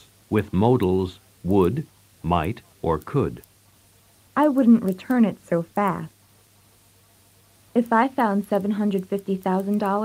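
From 3.29 s to 7.93 s the audio turns rough and watery, worst for about 3.3 s, then clears. This is a call bitrate drop: the encoder was starved of bits, which fits a fall from 64 kbps to around 25 kbps.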